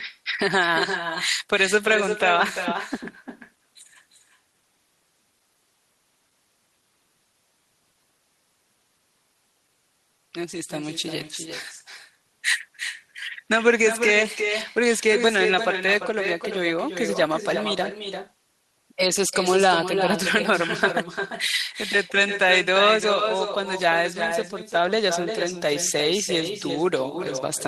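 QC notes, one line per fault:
Throughout: echo with no canceller, speech repeated roughly a third of a second later at about 7 dB down, thinner; spectrogram shows delayed duplicates of every syllable.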